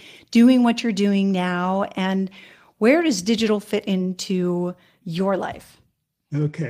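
Nothing in this recording of speech stands out as a technical fault, so there's nothing to flag here.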